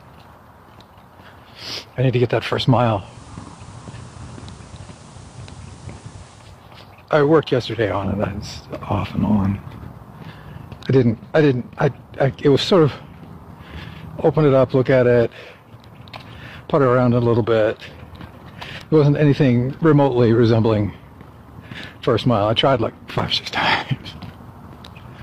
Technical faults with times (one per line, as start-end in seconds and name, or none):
2.87-6.66 digital radio blending to analogue